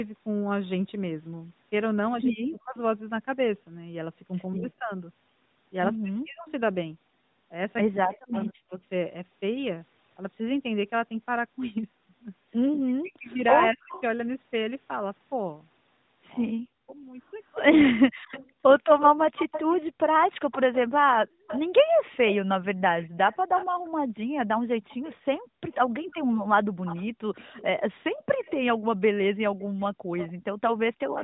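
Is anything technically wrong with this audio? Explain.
Yes. The speech has three kinds of fault.

Speech suppressed in double talk appears between 2.31 and 8.81 s, between 12.86 and 18.42 s, and between 30.57 and 31.06 s. The voice dips and breaks up in pieces, falling by up to about 40 dB. That adds up to roughly one and a half seconds in the first span, about a second in the second and a fraction of a second at the end. The likely cause is an echo canceller facing both sides talking at once. It could not tell the talker from loudspeaker echo, so it turned everything down.

Echo leak is heard as a faint delayed copy of the voice. It first appears from 8.11 to 8.36 s, about 217 ms late and about 25 dB below the speech. A brief scrap follows at 13.91 to 14.02 s, delayed 230 ms and about 15 dB down. From 18.31 s to the end it persists, trailing by 255 ms at about 15 dB down. The far side's canceller likely did not remove all the loudspeaker sound its microphone caught. 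The residue came back.

Background gated by the echo canceller occurs between 21.25 and 30.11 s. The room sound drops out by up to about 40 dB, totalling roughly one and a half seconds. While the loudspeaker played, the canceller clamped the microphone hard. The background returns each time it releases.

The audio passed through a call's microphone processing and the AMR narrowband mobile codec. The light codec coloring points to its 12.2 kbps mode.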